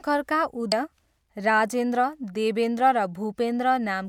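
Damaged data in a compressed stream at 0.72 s: corrupted bytes break the decoder's frame sync, producing a brief chirp, squawk, click or short hole in the speech before decoding recovers.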